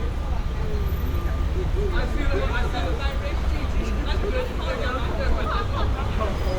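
No technical faults are audible.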